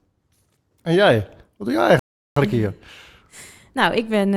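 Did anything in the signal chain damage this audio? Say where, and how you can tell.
Yes: a rebuffering stall during playback; the player's buffer ran dry after "doe jij", leaving silence from 1.99 to 2.36 s before the speech resumed seamlessly, adding 0.37 s.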